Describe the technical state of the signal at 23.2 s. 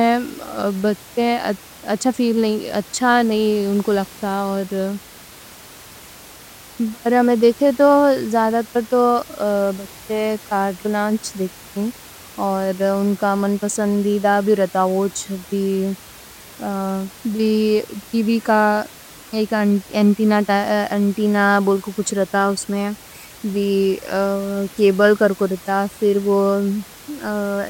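At 23.2 s the signal is intact, with only the room's own background noise sitting about 22 dB below the speech.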